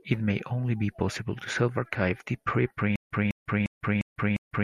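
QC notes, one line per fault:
2.96–4.64 s, stutter with silent gaps: a 203 ms burst repeats five times, every 352 ms, with 149 ms digital silence between, likely a stalled player retrying; unlike simple dropouts, the same fragment returns.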